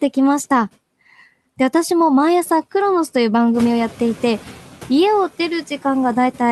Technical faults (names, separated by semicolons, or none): noise suppressor artifacts; noise suppressor catching up